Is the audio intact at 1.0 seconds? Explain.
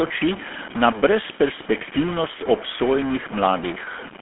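No. At 1.0 seconds, as across the whole clip, a stuck bit is audible as distortion riding on the speech, with a noisy fizz filling the gaps between sounds. The likely cause is one data bit held fixed at 0 or 1 by a broken line or converter, so roughly half the sample values are pushed off by that bit's weight in a pattern that follows the waveform, and small values flipping sign turn pauses into noise.

The same moment carries plainly audible GSM full-rate codec damage, again spanning the entire clip. This early mobile codec rebuilds the voice from a vocal-tract model excited by evenly spaced pulses, keeping only every third excitation sample, which gives the gravelly, buzzy roughness heard here. The sound is confined to a telephone band of about 200 Hz to 3.4 kHz, with nothing above 3.7 kHz, which fits a 13 kbps GSM full-rate stream.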